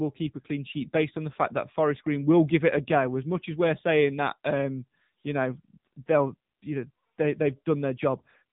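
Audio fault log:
throughout AMR narrowband mobile codec: buzzy, synthetic speech, nothing above 3.8 kHz; a pulse-driven vocal-tract model starved of bits, which fits roughly 8 kbps.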